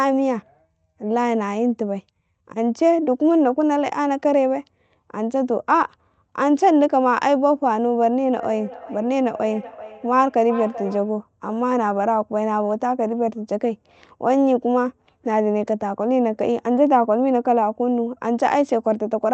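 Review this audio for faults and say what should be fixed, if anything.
Feedback echo between two devices runs from 8.4 to 11.3 s. A second device on the same call replays this microphone's sound, which is picked up again, arriving as a distinct delayed copy about 0.4 s behind and about 14 dB below the speech. Room reverberation would instead blur each syllable into a smooth tail. Prevent it by muting or headphoning all but one device in the room.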